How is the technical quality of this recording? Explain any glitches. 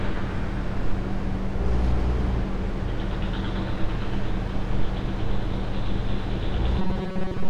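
A robotic buzz near the end is the one glitch here. From 6.79 to 7.49 s the sound becomes a rigid, metallic tone locked at 188 Hz. The likely cause is robotic sound from repeated short buffers: audio arriving too seldom, with roughly 5.3 ms chunks repeated for most of that stretch. Unlike mains hum, the buzz still follows the sound's rough contour.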